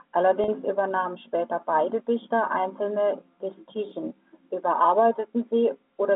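At 0.44 s, just before "übernahmen später beide", about 40 ms of speech goes missing, which fits two lost 20 ms packets. Packet loss with pitch repetition fills the hole: the receiver loops the last pitch period until 0.48 s, so the sound briefly holds as a slightly buzzy, frozen tone. A spectrogram shows flat, evenly spaced harmonic stripes with no formant movement, inside the G.711 telephone band of 200 Hz to 3.6 kHz. The waveform shows repeating cycles that fade in level.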